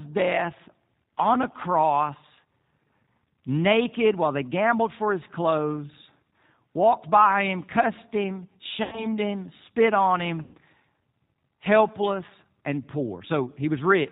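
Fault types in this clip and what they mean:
G.729 codec: the whole clip runs through this 8 kbit/s speech codec, which rebuilds the voice from a vocal tract model, a pitch predictor and a few pulses per frame. It cuts everything above 4 kHz, so the speech sounds dull, a bit rough and plainly synthetic throughout.
VoIP packet loss concealed by the speech codec: twice the decoder had to guess missing audio, at 8.83 to 9.07 s (about 90 ms lost) and 10.42 to 10.56 s (about 120 ms lost). Each gap smears into a fading buzzy tone or coloured noise, and the voice stays weak or distorted just afterwards while the codec recovers.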